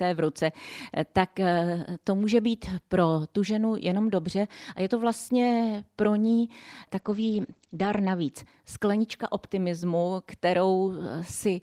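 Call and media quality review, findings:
Call bitrate drop, 7.0–8.37 s, between "pro ní" and "sklenička optimismu". Speech turns coarse and muffled. On the spectrogram the top band is cut from 20 kHz to 8 kHz, lowest for about 1.0 s. Opus encoder starved, consistent with roughly 32 to 14 kbps.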